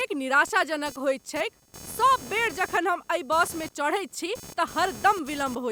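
Throughout, computer activity noise, processor load shifting the shared ground, adds a buzzy chirp pulsing near 500 Hz, about 20 dB below the speech, seen as evenly spaced harmonic stripes.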